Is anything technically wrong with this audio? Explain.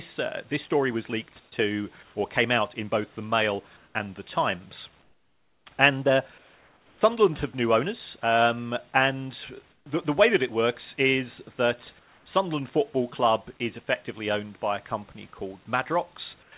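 Yes. In eight pauses in this speech, the room background gives way to a smooth, featureless hiss: 1.40–1.52 s (after "uh this story was"), 2.03–2.15, 3.77–3.95, 5.03–5.66, 6.38–7.01, 9.71–9.86 (after "new owners um and"), 11.99–12.26 and 16.43–16.52 s. These are likely cases of comfort noise in place of the background. The sender's voice detector likely stopped transmitting during the silences, and the receiver filled the gaps with synthetic noise. That noise drops by up to about 11 dB, most noticeably at 5.03 s.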